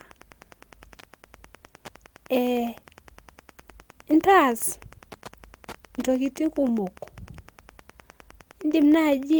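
Wi-Fi interference runs through the whole recording. A nearby Wi-Fi radio couples into the audio circuit, and the circuit rectifies its bursts. The beacon repeats every 102.4 ms, so a steady tick sits under the speech about ten times a second. It is faint, well below the speech. The ticking stays regular from start to finish.

At 4.58 to 4.61 s there is short concealed packet loss. About 20 ms of the call did not reach the decoder in time. The receiver filled that gap by extending the sound just before it, then blended back into the real audio. The result is a brief smear in the speech.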